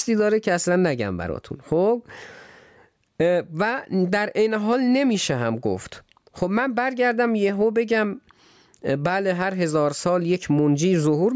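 Gain pumping runs through the whole clip. Each loud stretch of speech pulls the level down hard. The swing is large, somewhere around 15 dB. Loud and quiet passages sit close together, so the speech sounds squashed. The likely cause is input gain set far too high, with a fast limiter clamping each peak. The call's microphone processing, which removes everything above 8 kHz, adds nothing to the pumping.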